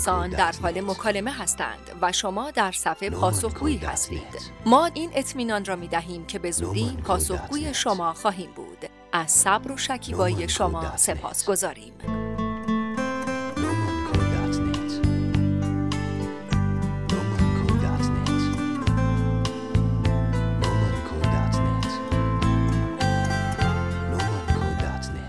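No technical fault can be heard anywhere in this audio. With nothing to point to, there are no times or causes to give.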